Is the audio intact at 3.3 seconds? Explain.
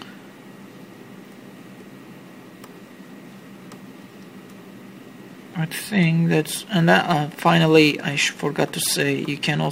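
Yes, at 3.3 seconds the audio is intact: no dropout, click, distortion or other fault can be heard there.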